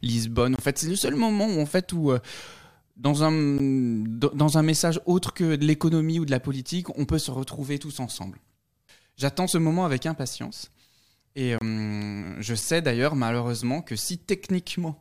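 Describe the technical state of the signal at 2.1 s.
At 2.1 s the speech signal is intact, with no audible fault at that moment.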